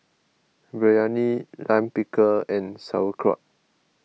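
At 0.48 s the speech jumps, most likely a dropped buffer (overrun): roughly 7 ms of samples were overwritten before being read, and the two sides butt together. Unlike a dropout, no silent gap appears; the sound simply skips forward.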